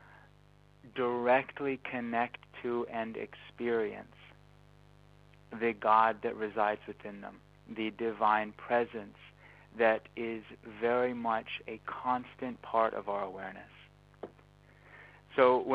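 A steady, raspy mains buzz sits under the sound from start to finish, well below the main signal at roughly 30 dB down. It is a 50 Hz buzz: sharp switching spikes from a dimmer, rectifier or unshielded lead arrive twice per mains cycle, spreading harmonics up into the kilohertz range.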